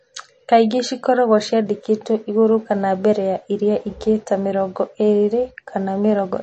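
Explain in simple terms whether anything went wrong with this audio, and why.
Something did go wrong, and you can hear it from start to finish: the speech has a washy, swirly quality, and the crisp top end is simply gone, with nothing above about 8.3 kHz. That points to heavy MP3 compression as the likely cause. When the encoder is starved of data, it lops off the treble and drops quieter details that flicker in and out, which dulls the sound and makes it watery.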